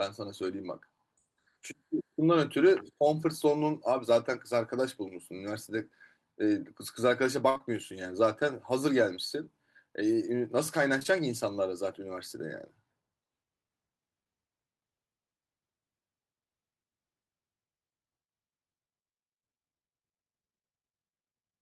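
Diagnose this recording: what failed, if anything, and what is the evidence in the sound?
Network: a burst of packet loss at 7.49–7.57 s. About 60 ms of the speech is missing and is replaced by the last sound held and fading, before the audio resumes further on.

Network again: short concealed packet loss at 7.57–7.61 s and at 10.99–11.03 and 11.03–11.06 s. Each roughly 20 ms hole is bridged by extrapolation, heard as brief smears.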